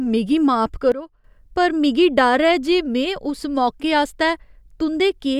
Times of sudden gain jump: 0.92-1.24

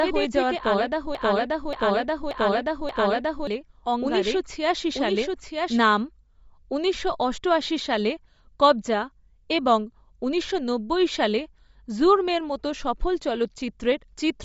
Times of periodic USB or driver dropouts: none

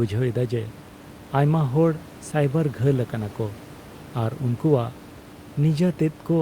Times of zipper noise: none

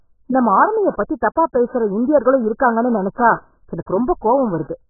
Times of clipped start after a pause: none

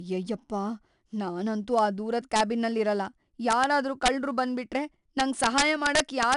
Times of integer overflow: 1.79, 2.36-2.40, 3.51-3.64, 4.06-4.08, 5.20-6.34

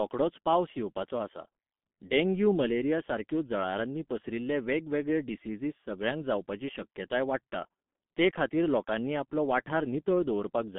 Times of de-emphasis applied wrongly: none

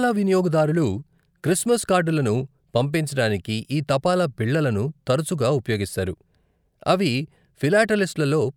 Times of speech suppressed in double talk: none

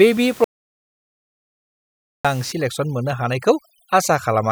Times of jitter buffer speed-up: none

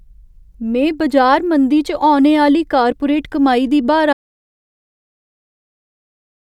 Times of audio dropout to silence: 4.13-6.53

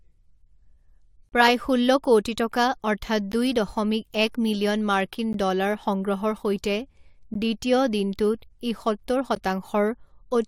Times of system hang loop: none

